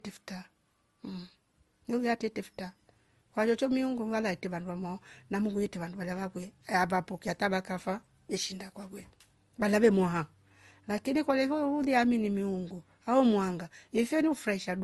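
Speech that was most likely encoded with one lossy codec and then re-encoded with another, a case of transcoding between lossy codecs that fits an MP3 stage near 50 kbit/s followed by Opus near 32 kbit/s. Throughout the clip the second encoder spends its limited bits reproducing the first one's artefacts while adding its own, so two layers of artefacts sit on top of each other. Nothing survives above 12 kHz.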